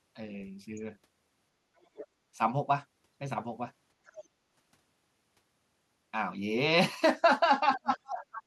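A short speech recording with two kinds of fault. Faint scraps of a second voice come through at 1.80 to 2.06 s, 4.07 to 4.25 s and 7.75 to 7.90 s. This is the other side's voice leaking through, roughly 20 dB below the talker, and nearer 15 dB below in the last scrap. The likely cause is a loudspeaker echo the canceller did not fully remove. From 7.77 to 8.43 s, the talker's own speech drops sharply while that last scrap overlaps it. The deepest dip is around 25 dB, and about half a second of speech is affected. This is speech suppressed in double talk. The likely cause is the echo canceller failing to separate the two voices and turning both down.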